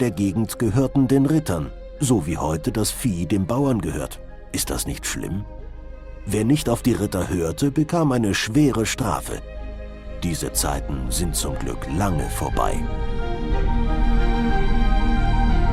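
No technical faults can be heard anywhere in the audio.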